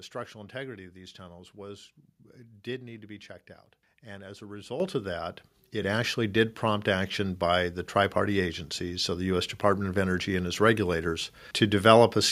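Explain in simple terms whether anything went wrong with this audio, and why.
Microphone volume stepped up twice: at 4.8 s after "as a", and at 5.82 s after "of that". Voice and background jump louder together because software raised the input level.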